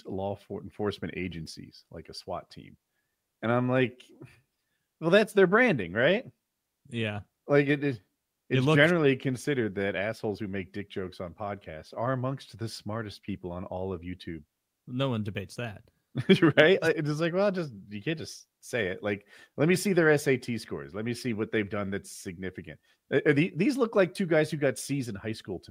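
Listening to this speech recording, nothing technical stood out as a fault at any point.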